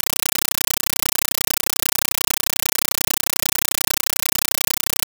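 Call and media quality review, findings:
Compressed stream played as audio, throughout: loud chattering static in place of the speech. An undecoded Dolby Digital bitstream is passed as PCM, giving 8 ms noise bursts 31 times a second, which fits AC-3 at 384 kbps.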